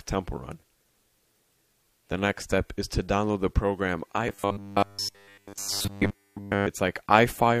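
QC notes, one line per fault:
4.28–6.67 s, robotic sound from repeated short buffers: the audio collapses into a rigid, metallic buzz pitched at 100 Hz, so a segment of roughly 10 ms is being looped. Across essentially the whole span, fresh material is replaced by repeats of that last short block, and the fixed loop period imposes a buzz that follows the underlying signal only roughly. The likely cause is input data arriving too late, with playback concealing the gap by recycling the previous buffer.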